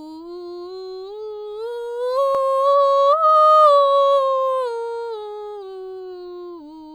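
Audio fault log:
Nothing stood out on listening to this music.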